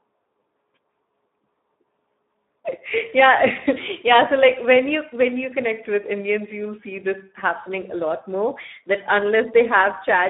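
From start to finish the speech sounds hoarse and buzzy, confined to a narrow band of 200 Hz to 3.7 kHz with nothing above 3.8 kHz. This is heavy Speex codec damage: a low setting, consistent with 8 kbps, starves the excitation of bits.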